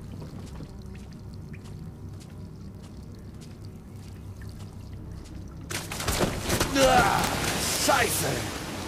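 A steady run of sharp, uneven ticks, about every 70 ms from 0.16 to 8.81 s, is word clock ticks: an unlocked receiver clock drifting roughly 300 ppm, slipping single samples.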